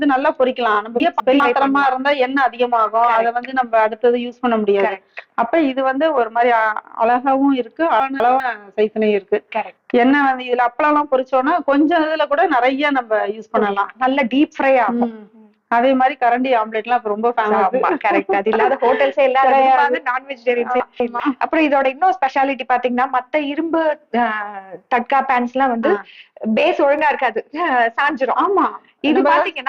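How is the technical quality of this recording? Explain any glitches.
The recording has one recurring fault: chunks out of order at 1.0–1.4 s, 8.0–8.4 s and 20.8–21.2 s. Each time a 200 ms chunk arrived one chunk late and played after its successor, so the sound jumps at three hard joins.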